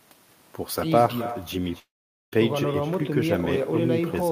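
Echo with no canceller runs through the whole speech clip. The far end is evidently playing the call over a loudspeaker, and its microphone sends that sound straight back with nothing to remove it. Every phrase is followed, roughly 300 ms later, by a copy about 16 dB quieter. The copy sounds thin, like a faint shadow of the talker trailing behind.

A call audio freeze runs from 1.79 to 2.34 s. The jitter buffer likely ran dry while packets were held up in the network, so the receiver stretched the last sound into a brief fading buzz that drops to near silence for about 460 ms. When the packets arrive the speech resumes exactly where it stopped, with nothing lost, but everything after that point is now about 0.53 s later.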